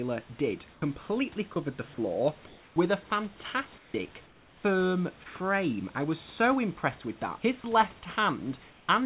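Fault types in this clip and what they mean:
Sound dropped by the voice detector: brief stretches of speech at 0.72–0.82 s, 1.54–1.56 s (just before "the floor with a") and 7.62–7.64 s become steady synthetic hiss, likely because the sender's voice detector classed that speech as background and stopped transmitting.
Comfort noise in place of the background: during pauses at 2.46–2.76 s, 3.78–3.94 s, 4.26–4.64 s and 8.7–8.88 s, the real room noise turns into featureless hiss about 2 to 4 dB quieter. This is likely discontinuous transmission with receiver-generated fill.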